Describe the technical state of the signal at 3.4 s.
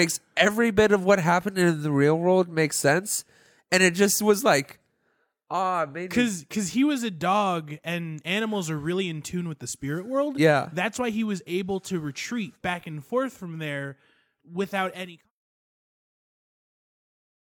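At 3.4 s the speech signal is intact, with no audible fault at that moment.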